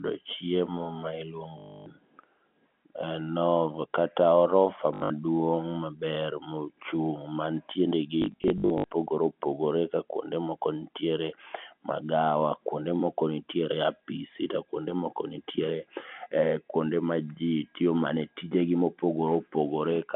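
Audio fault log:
1.58–1.86 s, packet loss with last packet repeated: right after "chiemo ma", 280 ms of audio is replaced by one chunk looped, giving a robotic buzz near 50 Hz, which fits 20 ms packets.
4.94–5.10 s, packet loss with last packet repeated: after "kata orofa", 140 ms goes missing in bursts over 160 ms. The longest burst is 80 ms. The repeated chunks stutter.
8.22–8.84 s, packet loss with last packet repeated: 320 ms is lost in scattered bursts over 680 ms, none longer than 60 ms. The repeated chunks produce stuttery patches through the narrowband telephone sound.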